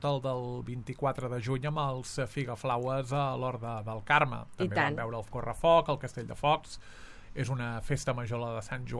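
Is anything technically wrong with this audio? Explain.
No, nothing is technically wrong with this audio.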